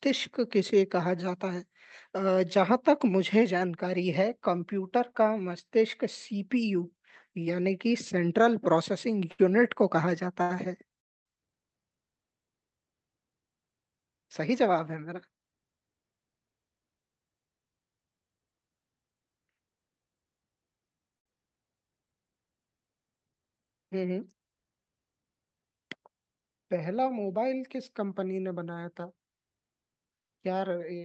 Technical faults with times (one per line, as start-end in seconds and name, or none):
9.31-9.40 short stall from a late packet
10.42-10.52 short stall from a late packet
11.00-11.27 call audio freeze
14.43-16.41 jitter buffer speed-up
21.18-21.27 short stall from a late packet